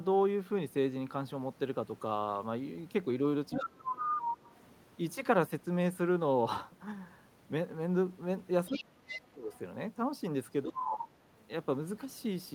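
Other side's voice leaking through, 3.52 to 4.21 s: a second voice sits only a little below the talker. The talker's device is likely playing the far end on a loudspeaker that the echo canceller did not fully remove from the microphone. Speech suppressed in double talk, 3.55 to 4.24 s: with both sides talking at once, the canceller likely could not tell its own talker from the echo and turned everything down, so the voice sinks by around 20 dB.

Other side's voice leaking through, 8.66 to 9.2 s: the echo is fainter, well under the talker, likely residual loudspeaker pickup. Speech suppressed in double talk, 8.68 to 9.53 s: the talker dips hardest here, by roughly 30 dB, likely the canceller clamping during overlap. At 9.52 to 9.59 s a faint scrap of the other side's voice leaks through again.

Speech suppressed in double talk, 10.64 to 11.15 s: a drop of around 25 dB, likely from the same double-talk confusion. 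Other side's voice leaking through, 11.38 to 11.44 s: a very faint trace of the far end, likely an echo remnant.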